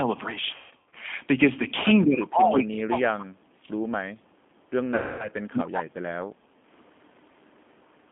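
Throughout, the speech passes through a G.729 codec at 8 kbit/s, which rebuilds it from a coarse filter and pulse model; the band stops near 3.5 kHz, leaving it rough and synthetic. From 0.56 to 0.94 s, VoIP packet loss concealed by the speech codec removes about 270 ms, with runs up to 150 ms; the decoder extends its last frame, so the voice smears into a buzzy tone or coloured noise that fades. A second loss, about 240 ms long, from 4.95 to 5.28 s, sounds the same and recovers weakly.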